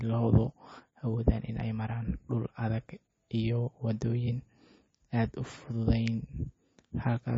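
MP3 compression runs throughout: nothing sounds above 7.6 kHz, and the speech turns watery and swirly, with chirping s sounds. The likely cause is a bit-starved MP3 encoder, fitting roughly 26 kbps, that cuts the treble and drops weak frequency lines frame to frame.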